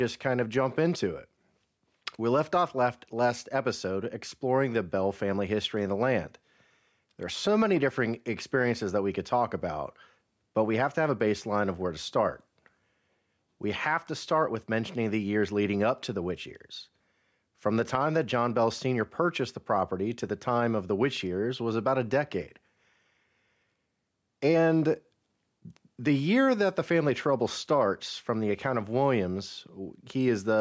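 Gain pumping runs through the whole clip. The gain swings by about 5 dB whenever the speech gets loud, so everything sounds squashed together. The likely cause is a fast limiter clamping down on mic gain set far too high.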